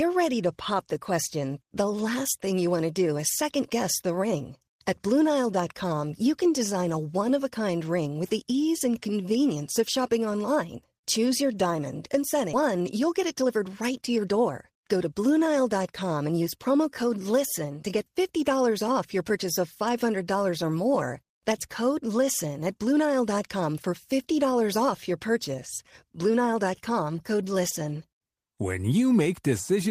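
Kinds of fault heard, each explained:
Jitter buffer speed-up: From 12.6 s to 15.1 s the speech runs at about 110% of normal speed while keeping its original pitch, so that stretch sounds hurried. The receiver's buffer had built up more audio than its target, as happens when delayed packets arrive in a burst, and it trimmed the excess by repeatedly cutting out short pitch-period-length segments. In total roughly a third of a second is removed.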